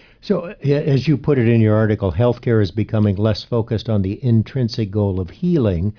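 No technical faults can be heard anywhere in it.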